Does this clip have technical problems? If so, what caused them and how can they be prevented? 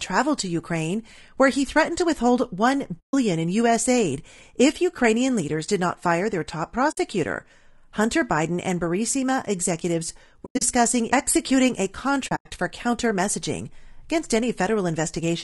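Yes. The speech sounds rough and grainy throughout, with noise between the harmonics and a dull, synthetic top band. This is plainly audible low-delay AAC compression, likely AAC-ELD at a low bitrate, around 32 kbps. Its short frames resolve pitch poorly. Encoding at a higher bitrate prevents this.

AAC frame loss with muting leaves soft-edged holes. They occur at 2.99–3.14 s, at 6.91–6.98 s after "not fire their top", at 10.45–10.62 s before "executing a", and at 12.27–12.52 s between "executing a" and "for counter messaging against". In the last two, gaps are scattered, each run at most about a tenth of a second. The decoder zeroed the lost frames and faded across them. Forward error correction or retransmission on the network path prevents this.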